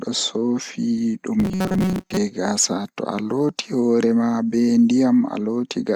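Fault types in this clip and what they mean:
Robotic sound from repeated short buffers: Between 1.40 and 2.17 s the speech collapses into a rigid, metallic buzz pitched at 188 Hz, with the syllable outline still loosely audible. The likely cause is audio arriving too slowly, so the playback side keeps looping the last fragment, about 5.3 ms long given the buzz pitch, while fresh material is dropped. Repeated fragments make up most of the signal there, which is why the tone sounds so fixed.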